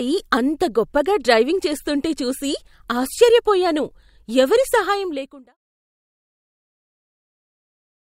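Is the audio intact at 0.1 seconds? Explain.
Yes, at 0.1 s the speech plays through cleanly with no fault.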